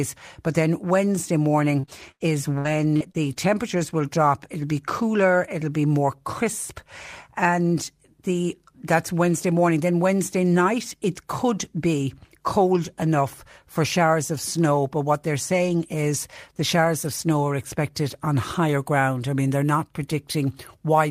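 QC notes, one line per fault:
1.79–3.37 s, repeated packet loss (robotic sound): seven gaps in quick succession, ending just before "will drop". Each hole is bridged by stretching the preceding sound, about 276 ms filled in total, but around 280 ms is simply gone, the longest hole 88 ms. Roughly a fifth of the span is concealed, giving a choppy sound with pieces missing. On a spectrogram, smeared repeated harmonic bands alternate with abrupt blank slivers; the waveform shows flattened, cloned cycles between cuts.
15.68–17.18 s, lost packet rebuilt from error correction: nine separate 20 ms frames, starting after "what they're" and ending just before "are expected on higher". Each lost frame was recovered from the low-bitrate redundant copy carried in the next packet, so there is no gap, only brief rough, grainy blips where the coarser copy plays. On a spectrogram these appear as thin vertical strips of noisier, less defined harmonics. 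The waveform stays continuous, with slightly blurred texture in those frames.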